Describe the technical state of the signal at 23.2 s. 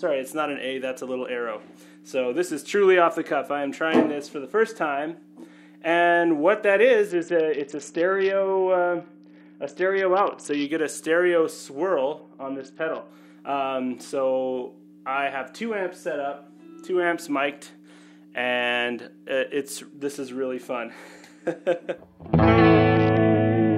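At 23.2 s the signal is inside a Bluetooth SBC bit pool drop that runs from 22.96 s to the end at 23.78 s. With the link squeezed, the encoder's bit allowance fell sharply, which points to a bit pool cut from 31 to 7, around 61 kbps. The upper sub-bands are starved and the rest coarsely quantised, so the treble goes dull and a gritty noise rises. A spectrogram shows the top frequencies cut away with grainy speckle below.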